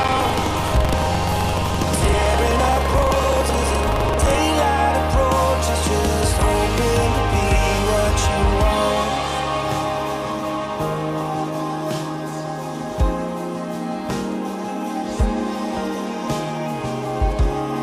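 From 0.00 to 4.38 s there is buffer tearing: writer and hardware reader have slipped, so each period mixes fresh audio with a slice roughly a tenth of a second old. Hard joins produce a rattling buzz near 23.4 Hz, which fits a 2048-sample buffer.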